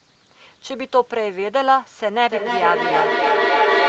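From 2.29 s to the end of the clip there is feedback echo between two devices. A second device in the same room plays back the far-end speech, and the first microphone captures it again. Its echo canceller only removes its own playback, so the sound returns roughly every 300 ms. The repeats become thinner and more ringing, and they build up rather than decay, peaking at about 1 dB above the direct speech. All of this sits within the call path's roughly 8 kHz bandwidth.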